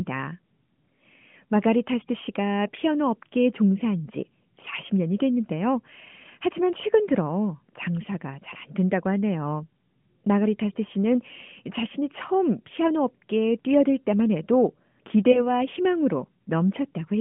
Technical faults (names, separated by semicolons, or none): lost AMR speech frames